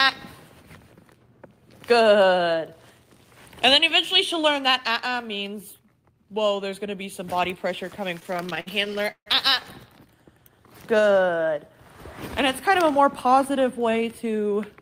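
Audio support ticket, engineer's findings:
Repeated stalls (stutter), 8.15–9.28 s. Packets late or slower than playout; jitter buffer underran some 20 times. Receiver extended last sound, fading on longer waits (longest 149 ms). 386 ms concealed, about a third of span, nothing lost. Audio drags, stutters.

Jitter buffer slow-down, 10.91–11.38 s. Buffer low or target delay just raised; receiver repeated single pitch periods back-to-back to rebuild reserve. 52 ms added, playback at 90% speed, pitch unchanged. Audio sounds drawn out.

Jitter buffer speed-up, 13.50–14.03 s. Buffer over target; receiver trimmed short pitch-period chunks repeatedly to cut latency. About 50 ms removed, playback at 108% speed, pitch unchanged. Audio sounds hurried, rushed.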